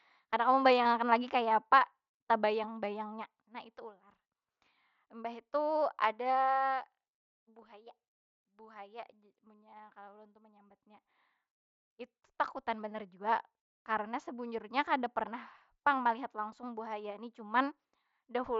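At about 0.84 s, just before "akan lagi kaya", there's a brief concealed Bluetooth headset packet loss. Roughly 15 ms of speech went missing between headset and phone, and the receiver filled it by repeating a matching bit of the preceding waveform, so it comes through as a short buzzy hold with a small warble where the speech returns, under the light mSBC graininess.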